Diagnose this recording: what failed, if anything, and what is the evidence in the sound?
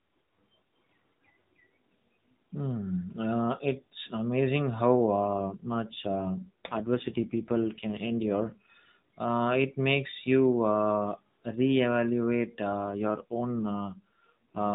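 At the codec and network stage, the link forced an AMR rate drop twice, from 5.39 to 8.70 s and from 12.86 to 14.74 s. The voice turns rougher, buzzier and more synthetic, which fits a fall from 12.2 to 5.9 kbps. The band stays narrowband, capped at 4 kHz, with no gap. The network traded speech bits for error protection, so the vocal-tract model was driven by fewer pulses per frame until the rate recovered.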